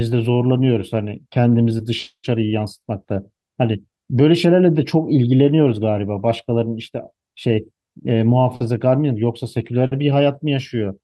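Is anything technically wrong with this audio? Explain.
Yes. There is clock drift between sender and receiver throughout this speech clip: the sender's clock runs about 4% slow, so the receiver's jitter buffer keeps draining. On a spectrogram the timing looks steady, but the stream's pace sags slightly against real time.

From 0.10 to 8.04 s, repeated timing corrections play the speech at 96% speed, with the receiver repeating short pieces, adding roughly a third of a second in total. The result is a faintly dragging, uneven tempo. A waveform shows small duplicated segments at irregular spacing.

There are two short stalls from a late packet, at 8.55–8.62 s and 9.86–9.93 s. Each time the buffer ran empty and the receiver stretched the last sound for 50 ms, losing nothing. Each is heard as a brief held or buzzy sound, visible on a spectrogram as frozen horizontal bands.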